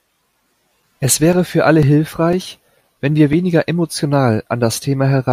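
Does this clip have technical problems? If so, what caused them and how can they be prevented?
Yes. From 0.33 s to 3.33 s, periodic USB or driver dropouts cut a few milliseconds of the speech to silence every 0.5 s, giving regular ticks. Their strict even spacing, rather than random placement, separates them from network packet loss. Give the audio interface its own USB port and disable the background task or polling that stalls the driver.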